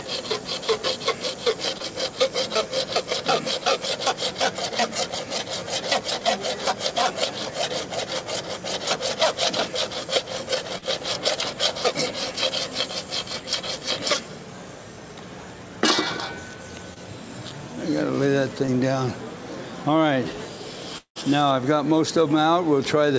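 You can hear a call path here: nothing comes through above 8 kHz, and the coding noise fits G.722 at around 64 kbps. There are four spots of short concealed packet loss, at 1.78 to 1.82 s, 10.78 to 10.84 s, 16.94 to 16.98 s and 18.66 to 18.70 s. The second one covers about 40 ms, and the others about 20 ms each. At each spot the audio briefly smears or wobbles where the receiver carried the last bit of sound across the missing packets and then blended back into the real signal. Later, from 20.98 to 21.17 s, there's a longer hole that's most likely a network dropout. About 180 ms never arrives, the sound is stretched into a fading tail, and roughly 100 ms of that stretch is just silence. The audio then picks up again without the lost piece.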